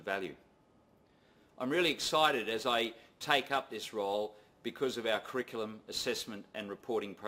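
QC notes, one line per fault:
No technical faults are audible in this audio; the signal holds steady and intact across its whole duration.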